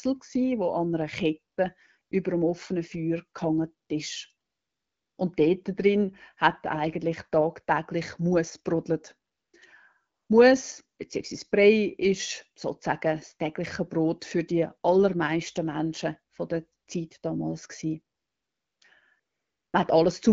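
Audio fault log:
1.55, 2.01–2.11, 3.87, 4.49–5.17, 9.31–9.53, 10.15–10.29, 18.15–18.81 and 19.19–19.73 s, AMR comfort noise: the phone judged these gaps silent and stopped sending speech frames. The receiver filled them with smooth synthetic noise built from a rough level and spectrum estimate, so the real background switches to a steadier hiss and back. The longest stretches follow "gehangen ist" and "damals gewesen". A 20 ms drop sits just before "über dem offenen".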